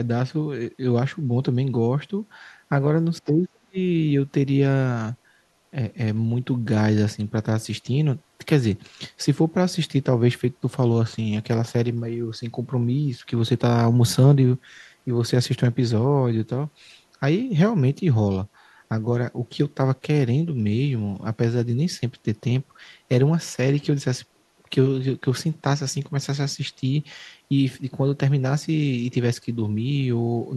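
From 3.19 to 3.76 s, the speech sinks sharply. At its lowest it falls by about 35 dB, close to silence. The affected stretch adds up to about half a second. The sound fits speech suppressed in double talk. The likely cause is both ends talking at once. An echo canceller then cannot tell the near talker from loudspeaker echo. It treats the near speech as echo and turns it down. The speech returns after 3.76 s.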